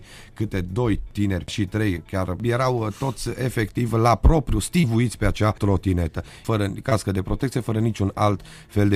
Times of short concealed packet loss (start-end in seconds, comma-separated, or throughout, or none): 4.81-4.85, 6.89-6.93